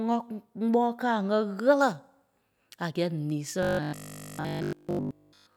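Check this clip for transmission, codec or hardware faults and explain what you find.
One fault is present. From 3.63 s to the end, robotic sound from repeated short buffers: audio likely arrived too seldom, so a roughly 20 ms buffer loops, giving a rigid 50 Hz metallic buzz.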